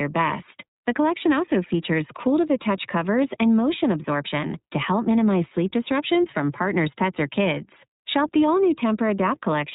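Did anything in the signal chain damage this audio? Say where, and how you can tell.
Yes. iLBC codec damage runs through the whole speech clip at the codec stage: nothing passes above 4 kHz, and the voice sounds plainly rough and synthetic. Each frame's excitation is coded independently, and the texture fits iLBC's 15.2 kbps mode with 20 ms frames.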